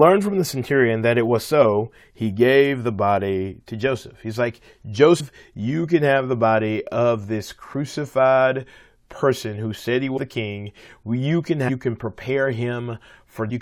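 Compressed frames are skipped at 5.2 s, just before "you can have the", at 10.16 to 10.18 s after "person who said he", and at 11.68 and 13.5 s. The audio jumps ahead about 150, 200, 400 and 400 ms, consistent with 21.3 ms frames.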